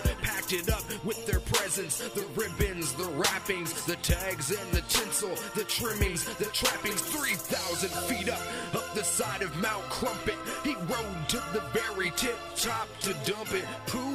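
A corrupt frame decoded produces a brief burst of misplaced energy from 2.40 to 2.50 s, peaking at about -25 dBFS, where a few damaged compressed frames were played anyway. A spectrogram shows a short smeared blob at unrelated frequencies. The waveform shows a sudden jagged spike.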